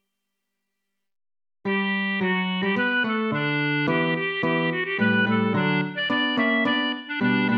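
No technical faults can be heard at any point in the audio.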